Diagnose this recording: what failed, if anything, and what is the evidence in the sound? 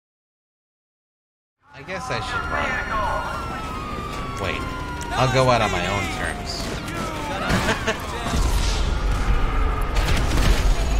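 Nothing has failed in this recording: the signal rises in a smooth, editor-style fade-in from around one and a half seconds to 2.7 s without any click or hard edge, and nothing in the audio points to a failure at any stage of the chain.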